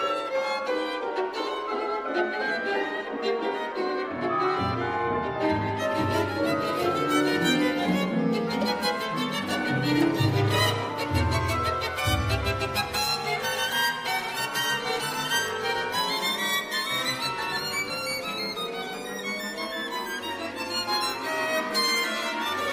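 From about 5.77 s to the end, pre-emphasis is left on. It follows the FM 75 µs curve, with the treble lifted for transmission and the matching de-emphasis never applied. That leaves the top end about 13 dB hotter at 10 kHz than at 1 kHz. You'll hear the sound go thin and overly bright at that point, with the sibilance and high detail jumping out and the low end feeling lightweight by comparison.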